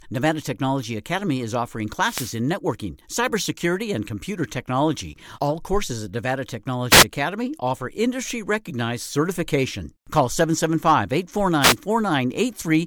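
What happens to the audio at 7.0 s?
A wireless microphone noise hit runs from 6.90 to 7.05 s. For about 0.15 s the analogue FM radio link fades as reflected signals cancel, so receiver noise rises and breaks through as a brief swish of static.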